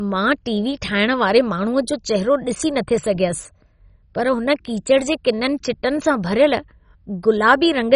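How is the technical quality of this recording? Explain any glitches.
The technical quality is poor, with heavy coding damage throughout. The speech runs through the whole clip sounding dull and granular. Nothing is present above about 10.4 kHz. The remaining upper range gurgles and flickers. This is likely MP2 compression at a very low rate, which fits about 32 kbps. Layer II divides the audio into 32 equal sub-bands and shares out bits among them. With so few bits, upper bands switch off entirely or drop in and out from moment to moment. The bands left are quantised coarsely, which gives the gritty, watery texture heard here.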